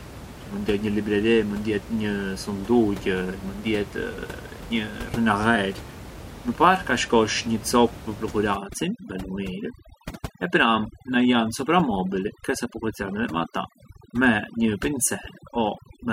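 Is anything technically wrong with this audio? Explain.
Yes. From 8.56 s to the end, overdone noise removal sets in. Bands near the noise estimate are cut hard, so the background drops and breaks up into twinkling specks. Before that, room noise sits about 15 dB below the speech.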